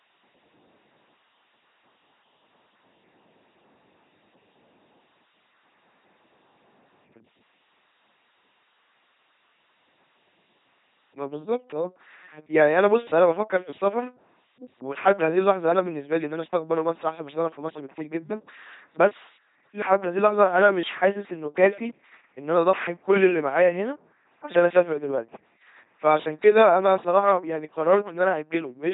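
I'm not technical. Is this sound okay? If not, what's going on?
No. From start to finish the speech has passed through an LPC-10 vocoder, a very old, heavily squeezed voice-transmission method. Each moment is treated as either a buzz or a hiss, so voices come out flat, buzzy and robotic, with stray hisses or buzzes where it guesses wrong, and nothing survives above about 3.8 kHz. Unlike ordinary poor-quality compression, which sounds watery or warbly, this sounds synthetic throughout.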